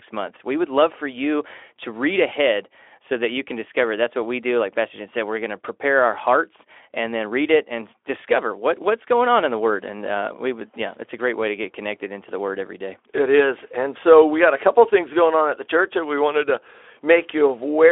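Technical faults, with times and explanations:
The speech is carried through a Speex codec over a telephone band of 300 Hz to 3.4 kHz, with the light coding roughness that fits a bitrate around 15 kbps, and no faults are present.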